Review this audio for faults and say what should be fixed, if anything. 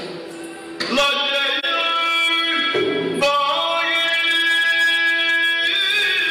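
At 1.59 to 1.65 s there is an AAC frame loss with muting. The sound fades smoothly into a brief dip and fades back out of it, and the missing stretch of about 43 ms fits a single lost frame. The decoder zeroed that frame's spectrum, and the overlapping transform windows blended the gap in and out. A hard buffer dropout would end abruptly with a click; this one has soft edges. Protect the stream against packet loss with error correction or retransmission.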